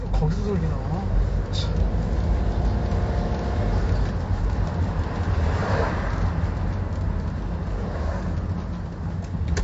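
From start to finish the audio has nothing above 7.7 kHz, so it sounds dull and closed-in, and the damage is plainly audible. Sustained and noisy parts carry a smeared, warbling, fizzy texture. This is likely AAC compression at a bitrate around 32 kbps. At that rate the encoder cannot afford the upper band, so it lowers the cut-off. The bits that remain are spread thinly across the quantised spectrum, and the warble comes from that coarse quantisation changing frame to frame.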